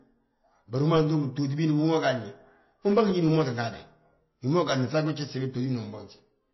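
From start to finish the speech sounds dull and watery, with nothing above 5.8 kHz and faint detail swirling in and out. That's likely MP3 compression starved of bits, which fits roughly 24 kbps, with the encoder chopping the treble and dropping weak frequency lines frame to frame.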